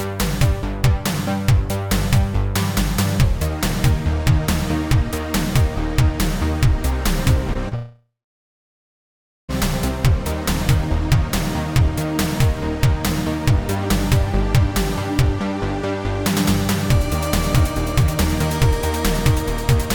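Short concealed packet loss at 7.53 to 7.57 s and again at 7.69 to 7.73 s: a few hundredths of a second of audio arrived too late to decode, so the receiver extended the preceding sound and crossfaded back, leaving two brief smears.

Long network dropout from 7.75 to 9.50 s: the filled-in continuation fades into about 1.4 s of silence before the sound resumes further along, with roughly 1.7 s of material gone, likely because packets stopped arriving for that stretch.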